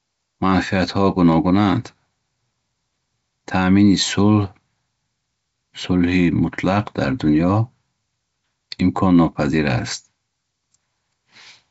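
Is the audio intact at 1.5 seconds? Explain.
Yes, at 1.5 seconds the audio is intact, with only the band-limited sound of G.722 wideband telephone coding at 64 kbit/s.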